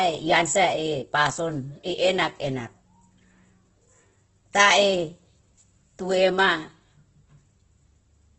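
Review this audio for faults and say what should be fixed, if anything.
Throughout the speech, the sound is rough and grainy, with nothing above 8.1 kHz. A spectrogram shows a flat ceiling there and noisy, smeared bands below it. This is likely heavy Opus compression, consistent with about 12 kbps. To prevent it, encode at a higher Opus bitrate, around 32 kbps or more, so the full band is kept.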